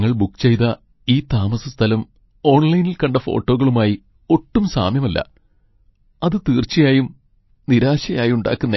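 Throughout, the audio has likely passed through MP3 compression at a starved bitrate, which fits about 25 kbps. The encoder cut everything above 5.8 kHz and let weak frequency lines flicker between frames, so the speech sounds dull, watery and swirly.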